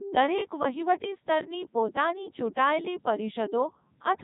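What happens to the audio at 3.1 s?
At 3.1 s the speech is still carrying the Codec 2 vocoder damage that runs through the whole clip. The damage is heavy. The voice is robotic and buzzy, and nothing is present above 3.8 kHz. The decoder does not keep the original waveform. It rebuilds the voice from sine waves, using only pitch, voicing, energy and a rough spectral outline. The sound points to Codec 2's top 3.2 kbit/s mode.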